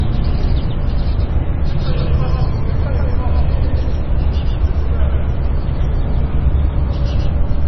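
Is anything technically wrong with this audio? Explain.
Yes, two faults run throughout.

A doubled audio track: an equally loud copy trails by roughly 150 ms, likely from a second capture path or misaligned edit, sounding like a hard slapback. The waveform shows every transient repeated.

Heavy MP3 compression: the sound is watery and swirly with smeared attacks, likely from a very low bitrate. The spectrogram goes blank above 5.9 kHz and flickers with gaps below.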